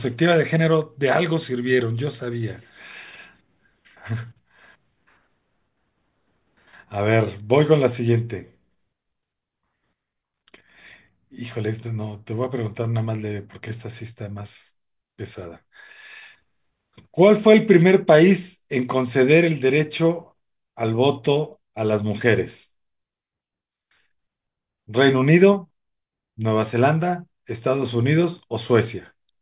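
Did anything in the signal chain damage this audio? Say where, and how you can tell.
No, nothing along the chain audibly damaged this speech recording.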